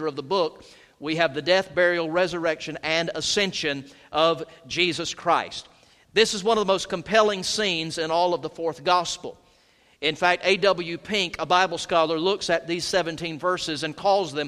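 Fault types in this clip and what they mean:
No technical faults can be heard anywhere in the audio. There is nothing to list under any fault heading.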